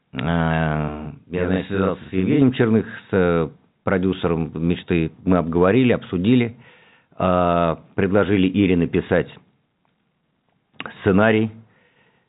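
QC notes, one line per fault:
0.88–2.42 s, channel delay (doubling): one channel runs about 43 ms late and the summed mono carries a second, equal-level copy, heard as a single slap over the telephone-band sound that stops near 3.8 kHz; unlike room reverb there is no decaying tail. The offset fits a 2048-sample buffer.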